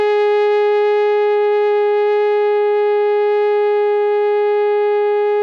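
Nothing goes wrong anywhere in this bit of music; it just runs along with no technical faults to point out.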